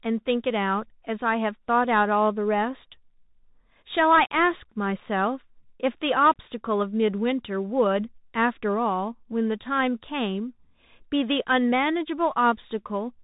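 From start to finish the speech passes through a Bluetooth CVSD headset codec, which sends one up-or-down bit per sample with an adapting step size, fitting a 64 kbps link. Nothing above 4 kHz survives, s sounds turn scratchy, loud high sounds outrun the step and distort, and granular hiss sits underneath.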